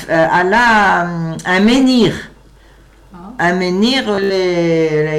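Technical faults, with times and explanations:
4.15–4.32 s, Bluetooth stutter: the wireless link dropped or delayed audio packets, and the receiver filled each gap by replaying its last short buffer. The repeated slices produce a brief buzzy, machine-gun stutter. About 107 ms of sound goes missing, scattered over roughly 152 ms, with the longest unbroken gap about 76 ms, which points to several lost packets. Playback then resumes further along, as though the sound had continued underneath.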